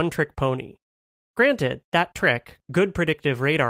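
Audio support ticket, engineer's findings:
No audible fault found on review of the speech recording; nothing to attribute to any component in the chain.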